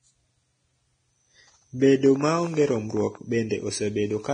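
Low-bitrate Vorbis compression is the likely cause of the damage heard throughout the speech. The encoder kept a smooth outline of the spectrum but quantised the detail above it so coarsely that fine structure turned into noise of similar energy, and it cut everything above 9.7 kHz. The codec damage is heavy, which fits a bitrate of around 23 kbps. The result is hissy, grainy speech with roughened tones and smeared onsets.

From 2.06 to 3.16 s, a train of clicks is likely caused by something injecting repeated pulses, such as interference from nearby equipment or a faulty connection or power supply. About fifteen clicks of similar shape arrive at an irregular pace, averaging 12.8 per second. Each reaches about the level of the speech. Over that stretch they are heard as a stuttering tick or pop laid over the sound, and they continue through any gaps.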